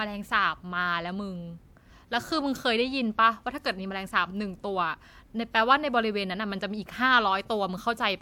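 Nothing technical goes wrong anywhere in this bit of speech, so there's no fault to point to at any moment.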